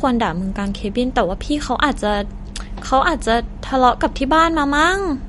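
Throughout, the speech sounds watery and swirly, with nothing above 11.2 kHz. This is likely MP3 compression starved of bits, fitting a low bitrate near 48 kbps.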